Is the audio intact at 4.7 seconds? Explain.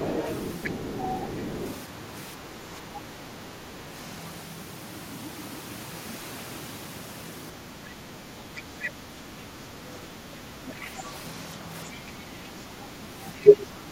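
Yes, at 4.7 seconds the speech plays through intact, with no audible fault at that moment.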